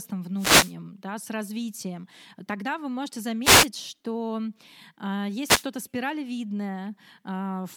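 Three wireless microphone noise hits break into the speech: from 0.36 to 0.75 s, just before "да с развитием тогда"; from 3.43 to 3.68 s, right after "развитием тогда вы можете"; and from 5.42 to 5.67 s. Each is a brief swish of static as the FM radio link fades and receiver hiss swells over the voice. On a spectrogram each shows as a broadband noise smear covering the speech harmonics. The waveform gets a fuzzy, dense band in place of clean speech.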